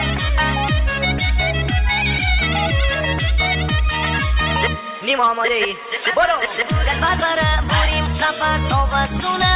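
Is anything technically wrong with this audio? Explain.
No, nothing here is technically wrong. The sound carries the usual coding grain of a call path and has nothing above 4 kHz, which fits a narrowband telephone codec such as G.711 at 64 kbps.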